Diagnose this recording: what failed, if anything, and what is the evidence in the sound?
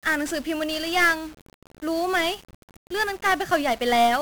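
The speech is fuzzy and crackly from start to finish, with a dense broadband hiss that buries the treble. This is 1-bit DFPWM compression, a codec-stage failure. Each sample keeps a single bit that nudges an adaptive level up or down, so the waveform is only crudely tracked and strong quantisation noise covers the whole band. The damage is heavy and fits a stream of about 48 kbps.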